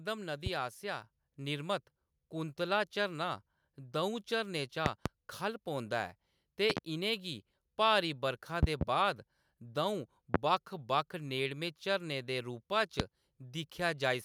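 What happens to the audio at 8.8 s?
A sudden voltage step, likely from a plug, switch or static discharge, enters the signal path between 8.63 and 8.84 s. This loud pop lands as two sharp thumps, about 25 dB above the speech, which carries on underneath.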